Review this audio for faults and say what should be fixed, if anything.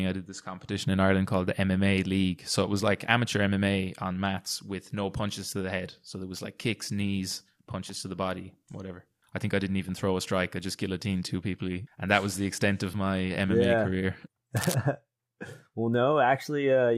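Cable scratch noise, 14.57 to 14.76 s: ragged rustling just below the speech level, likely a worn connector shifting and rapidly changing its contact resistance. To prevent it, clean or replace the suspect cable and connectors, and secure them so they cannot move during recording.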